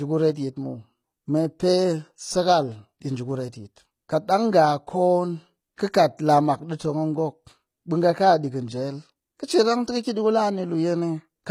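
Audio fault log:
throughout: HE-AAC compression. The upper spectrum is bright but does not sound native: sibilants come out gritty and lispy, with a metallic sheen, and the treble harmonics fail to continue the pattern of the lower ones. This is likely spectral band replication, where copied low bands are pasted upward under a coarse envelope, which fits a low bitrate around 24 kbps. A spectrogram shows blocky, repeated-looking texture above the crossover and a visible seam where true harmonics end.
5.76 s: pre-echo. A short hiss of about 17 ms arrives just ahead of a sharp attack, which itself sounds softened and smeared rather than crisp. The transform block containing the attack had its quantisation noise sized for the loud onset, and that noise spread back into the quiet stretch before it. On a waveform a thin fuzzy skirt precedes the transient; a spectrogram shows a broadband smudge leading the onset edge.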